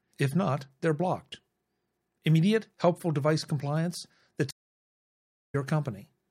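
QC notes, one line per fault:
4.51–5.55 s, stream reconnect: the connection dropped, giving 0.98 s of silence, then a fresh decoder resumed the speech roughly 0.7 s further on, so a stretch is skipped. The waveform shows a flat gap and the spectrogram a blank column, with a short fade-in as sound returns.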